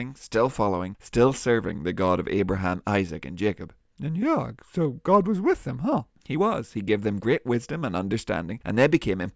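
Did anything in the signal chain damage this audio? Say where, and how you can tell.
No, nothing in the chain damaged this.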